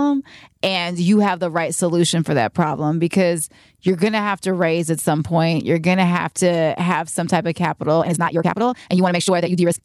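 Right after "have some type of", at 7.97 s, the speech suddenly rushes ahead at roughly twice its earlier pace and stays that way to the end of the clip at 9.84 s. The pitch doesn't rise with the speed. This is a time-stretched section, likely from software squeezing that stretch to about half its length by dropping short slices of audio to hold the pitch steady.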